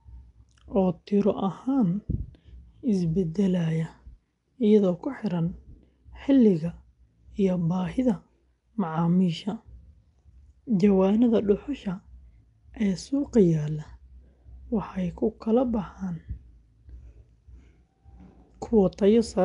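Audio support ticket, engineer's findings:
Rough, hissy halo and smeared, underwater speech throughout, nothing above 10.6 kHz. Likely Nellymoser compression, fits about 44 kbps; bit-starved bands filled with noise.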